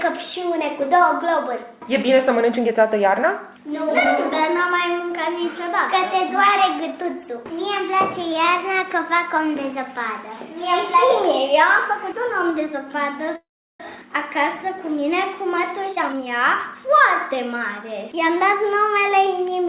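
At 13.36 s the audio stalls: the last sound carries on briefly as a fading buzz or hiss, then drops to silence for about 0.36 s before resuming at 13.82 s exactly where it left off, so about 0.44 s of gap has been inserted and nothing is lost. This is a call audio freeze, likely caused by packets being held up in transit so the jitter buffer ran empty and the receiver padded the wait until they arrived. Soon after, the sound becomes hurried at unchanged pitch. From 15.89 s to 16.27 s it runs at about 175% speed, and from 16.74 s to 19.33 s it runs more subtly fast at about 106%. This is jitter buffer speed-up: with the buffer holding more audio than it aims for, the receiver trimmed many short pitch-period slices in succession, removing roughly 0.3 s in the first stretch and about 0.15 s in the second to pull the delay back down. Throughout, nothing sounds above 4 kHz, with the coding noise of a narrowband call path, which fits G.711 mu-law at 64 kbps.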